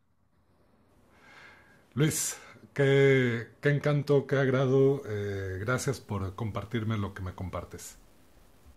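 From 4.78 s to the end, the speech turns grainy, with distortion following the signal, likely low bit depth without dither: truncation to 9 bits, error around 40 dB down.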